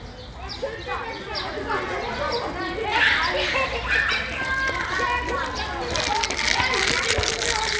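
The sample-rate converter taking the audio from 48 kHz down to 16 kHz was restarted on every block, resampler restarted on every block, so each 10 ms chunk was filtered without its true neighbouring samples at the edges. Every boundary therefore carries a small error, and because these repeat 100 times a second throughout the clip, they fuse into a steady 100 Hz buzz riding on the sound, present only where there is signal and gone in the quiet gaps.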